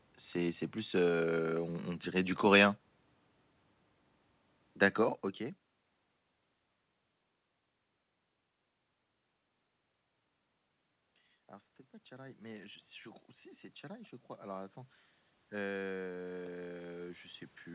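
In this speech clip, automatic gain rising: the gain control twice judged the input too quiet and raised it, swelling voice and room noise together by about 4 dB from 11.48 to 12.88 s, just before "je crois si c'est", and again from 15.5 s to the end.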